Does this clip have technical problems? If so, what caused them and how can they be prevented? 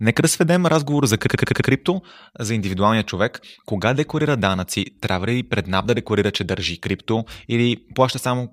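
Yes. A system hang loop from 1.28 to 1.71 s replays one 85 ms slice five times, an 11.7 Hz machine-gun stutter that fits a 4096-sample ring buffer. On a waveform it shows as identical repeating blocks, and on a spectrogram as vertical seams at even spacing. Keeping the audio thread at real-time priority and having the driver mute its output on underrun stops a stall from replaying stale buffer contents.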